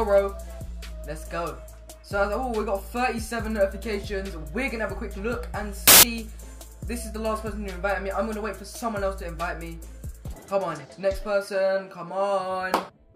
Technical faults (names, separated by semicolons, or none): samples built from the wrong bytes